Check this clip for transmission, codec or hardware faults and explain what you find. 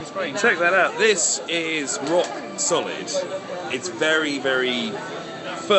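No transmission, codec or hardware faults are audible here.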